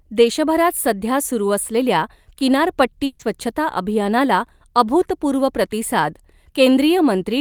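At 3.05 s a burst of packet loss begins. About 140 ms of speech is lost and filled with a fading continuation. The sound resumes at 3.21 s.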